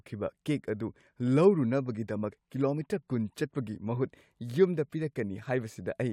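No technical faults are audible.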